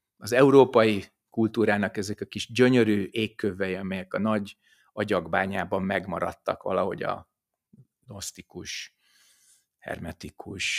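From 4.67 to 4.97 s, the noise suppressor mistook part of the sound for noise, pulling it down by about 9 dB so it briefly dips.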